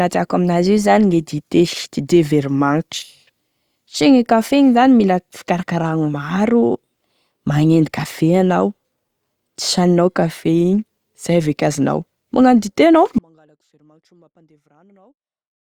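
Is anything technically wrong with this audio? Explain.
Yes. At 13.19 s, just after "dite anao", the speech drops out to a faint residue and stays that way until the clip ends at 15.6 s. The signal was likely lost upstream while the path after the break stayed live, so what remains is a faint sound around 35 dB below normal level. Unlike a natural pause or a fade-out, the cut is abrupt and lands mid-flow, and the gap is never fully silent.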